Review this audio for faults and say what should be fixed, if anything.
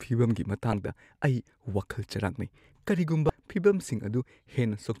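Damaged data in a compressed stream causes brief blips in this speech at 0.73 s and from 3.27 to 3.30 s, where corrupted bytes make the decoder misread frames and lose sync until the next header. Checksum-protected storage and transport, with damaged frames discarded cleanly, would prevent it.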